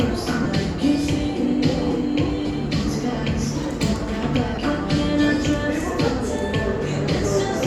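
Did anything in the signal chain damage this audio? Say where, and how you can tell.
Yes. Lost LE Audio frames at 0.43–0.46 s, 2.47–2.50 s and 4.55–4.58 s, from the Bluetooth link and LC3 decoder. Each 22.5 ms gap, consistent with three 7.5 ms frames, is filled by reusing the last spectrum with random signs, smearing the sound into brief noise.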